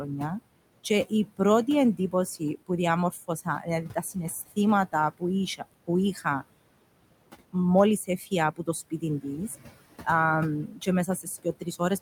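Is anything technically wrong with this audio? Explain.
Yes. Throughout the clip, the room noise, which sits about 15 dB below the speech, dips away between phrases and swells back under them. These are noise suppressor artifacts: the processor treats steady noise as something to remove frame by frame, pulling those bands down by about 21 dB whenever speech stops.

In five stretches, from 0.84 to 2.7 s, 3.11 to 4.16 s, 5.58 to 6.42 s, 8.07 to 9.26 s, and 10.68 s to the end, the speech itself is cut by the noise suppressor. Brief moments, adding up to around a fifth of a second in most stretches and a tenth in one, sound swallowed or faint, dropping by about 13 to 20 dB, because the suppressor mistook quiet speech energy for noise.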